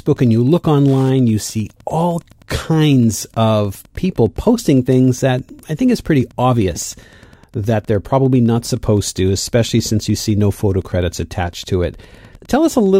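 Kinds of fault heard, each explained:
Wi-Fi interference: a nearby Wi-Fi radio's beacon gets rectified by the audio circuit, so there's a faint tick every 102.4 ms, about 35 dB under the speech throughout.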